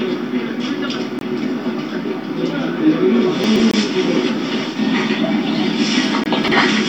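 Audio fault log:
1.19–1.21 s, 3.71–3.74 s, 6.24–6.26 s: gap between chunks. The sound stops dead for about 23 ms at each of these points, with hard edges on both sides, then resumes exactly where it left off. The holes recur every 2.5 s, which points to chunked delivery with padding or a late start on each chunk. Unlike a dropout, no audio is missing; it is only pushed apart.
3.44–3.60 s and 6.44–6.52 s: chunks out of order. In each span a 40 ms slice of sound plays in the wrong place. At 3.44 s it lands three chunks late, and at 6.44 s one chunk late, giving a brief jumbled moment. Unlike a gap between chunks, there is no silent hole. Everything is present, but the sequence is scrambled.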